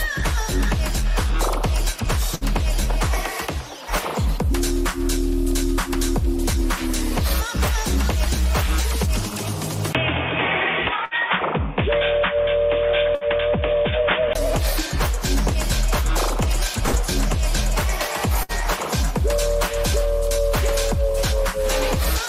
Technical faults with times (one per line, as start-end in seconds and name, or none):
2.35-2.44 burst of packet loss
9.93-14.35 input switched to a poorer device
11.05-11.14 burst of packet loss
13.15-13.24 burst of packet loss
16.87-16.96 burst of packet loss
18.43-18.52 burst of packet loss